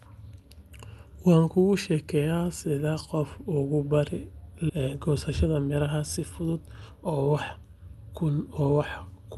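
At 4.69 s the speech jumps forward in a skip ahead: about a second of audio is gone, with no fill inserted, and the two sides of the cut are joined almost directly. A stretch of audio was dropped while later audio was already waiting in the jitter buffer, so playback lands later in the stream. The delay drops by roughly the same second, and the listener hears an abrupt splice rather than a silence.

From 4.79 s to 7.51 s the jitter buffer speed-up follows, running the speech at 112% of normal rate while the pitch stays unchanged. The buffer was still holding more audio than its target, so the receiver repeatedly removed short pitch-period slices, around a third of a second in total, to bring latency back down. Across this stretch the talker sounds hurried, with the Opus call path's coding texture and its upper limit near 12 kHz carrying on underneath.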